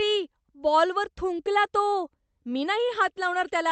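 Nothing stood out on listening to this speech recording, which sounds as expected for audio carried over a call connection.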